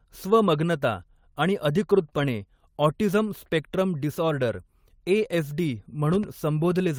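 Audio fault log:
2.05–2.07 s and 2.13–2.19 s, lost packet rebuilt from error correction: no gap here, but the speech turns briefly rougher and grainier, for about 20 ms and then about 40 ms. Packets went missing, and the decoder played the low-bitrate backup copy carried in the packet after each one. That copy is a thin, coarse version, so these stretches sound degraded rather than silent. The second stretch points to two packets lost back to back.
2.09–2.13 s, short concealed packet loss: tucked between those two rebuilt stretches, about 20 ms of audio never arrived in time and had no backup. The receiver papered over it by extending the preceding sound for about 17 ms and then blending back into the real signal. You hear a tiny smear or wobble rather than a dropout.
6.14–6.27 s, loud pop: two sharp pops in quick succession, peaking about 5 dB above the speech, which carries on underneath them. 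The likely cause is a sudden voltage step or pulse getting into the chain, such as a plug, switch, static discharge or driver glitch. The circuitry downstream shapes each spike and may make it ring briefly.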